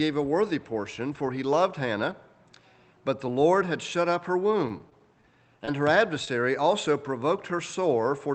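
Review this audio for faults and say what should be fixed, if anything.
Between 4.51 and 5.25 s the sound turns choppy. This is repeated packet loss: five separate gaps, the longest 22 ms, were each patched by extending the preceding sound, so about 11% of that stretch is synthesised. A larger jitter buffer, forward error correction, or a more stable network route would prevent it.

Two brief smears follow, at 5.65–5.69 s and 6.25–6.29 s. Each is a short concealed packet loss, where about 20 ms never arrived in time and the decoder bridged the hole by continuing the last sound before blending back into the real signal. Enabling in-band FEC and reducing network jitter would prevent these dropouts.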